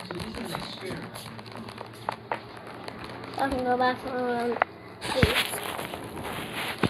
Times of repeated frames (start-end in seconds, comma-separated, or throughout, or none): none